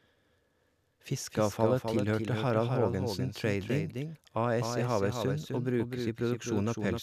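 From start to finish the speech carries a doubled audio track. A second copy of the whole sound trails the first by roughly 300 ms. It sits about 5 dB below the original. The copy is full-band and dry. It has no decay and no room colour, so it reads as a separate repeat, not an echo. The likely cause is the same audio captured twice, once through a slower path.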